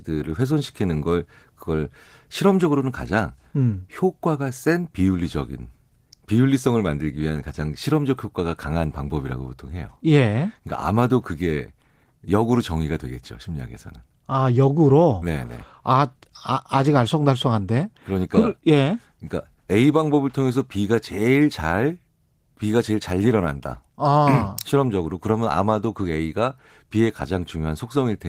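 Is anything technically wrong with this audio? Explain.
No, nothing technically wrong can be heard in this speech. The Opus voice compression keeps the full audio band, which fits its hybrid mode at a moderate rate of about 20 kbps, and leaves only a light coding texture.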